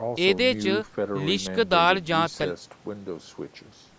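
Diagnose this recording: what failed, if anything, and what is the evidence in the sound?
Nothing failed here: the speech has simply gone through a call's microphone processing, which trims the deepest bass and leaves nothing above 8 kHz, exactly as that stage is meant to.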